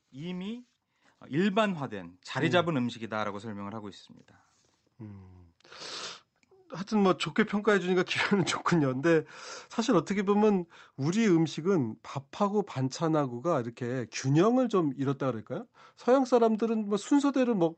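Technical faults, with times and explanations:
1.02 s, microphone volume stepped up: speech and background jump together by about 7 dB at once, as the call software raised the mic's input gain.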